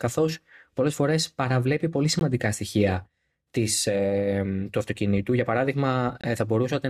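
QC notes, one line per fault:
2.19 s and 6.21–6.24 s, gap between stream segments: hard-edged silent holes of about 17 and 25 ms, four seconds apart, where mistimed segment boundaries leave unfilled time padded with silence.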